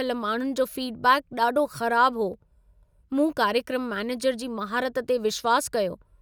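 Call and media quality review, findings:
Block of digital silence at 2.34 s, just after "फीडबैक ॾाढो ख़राब हो": single sharp tick in the speech. A roughly 2.9 ms hole, fitting a 128-sample buffer not filled in time by the audio output path. Hard edges, no fade or concealment, not a smeared network dropout.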